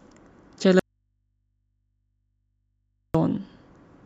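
At 0.79 s the speech cuts out abruptly, an audio dropout to a faint residue lasting 2.35 s until 3.15 s, with only low mains hum left far below the signal. The likely cause is a live input path that lost its source; the hard edges and hum, not silence, distinguish it from a pause or fade.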